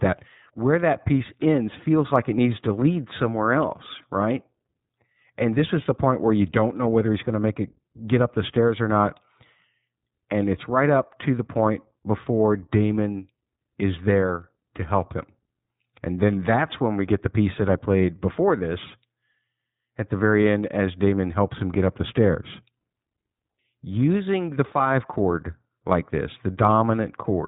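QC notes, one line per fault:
Throughout, iLBC codec: the speech is band-limited with nothing above 3.8 kHz, and it has a plainly audible rough, slightly synthetic grain. Each short block of excitation is coded on its own, with no carry-over from the previous one, here in 20 ms frames at 15.2 kbps. A spectrogram shows a hard ceiling at 3.8 kHz with empty space above.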